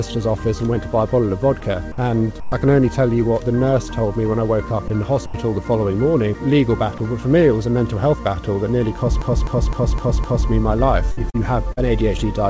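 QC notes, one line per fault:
1.60–2.52 s, 4.88–5.34 s and 11.12–12.18 s, sound chopped by the voice detector: in each stretch the audio keeps cutting in and out, with short pieces swapped for synthetic comfort noise (about 200 ms, 100 ms and 140 ms in total), so the sound stutters. The likely cause is the sender's voice detector repeatedly judging quiet parts as background and pausing transmission.
6.98 s, sound dropped by the voice detector: a single 20 ms gap where the real sound vanishes and a flat patch of comfort noise sits in its place before the audio picks up again. This is likely the voice detector briefly classing the sound as background and stopping sending, with the receiver filling the gap with generated noise.
9.22–10.50 s, system hang loop: one 256 ms chunk repeats exactly five times, giving a mechanical stutter at about 3.9 per second, with essentially nothing of the surrounding audio lost. 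The machine or its driver froze while the sound hardware kept replaying the same ring buffer. A 256 ms loop fits a 4096-sample buffer. The G.722 call path caps everything at 8 kHz, so even the repeats lack top-end air.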